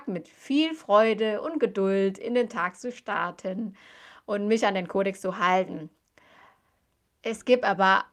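Listening to this speech recording, nothing stood out as a technical problem anywhere in it.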